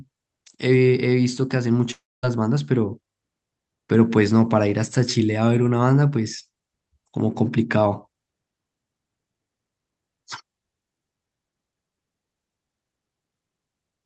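A long network dropout runs from 1.91 to 2.25 s, about a third of a second of speech that never plays. The last sound smears into a fading buzz, then roughly 230 ms of near-silence follows before speech resumes, the likely cause being lost packets over the call's Opus path, whose top end stops near 8 kHz.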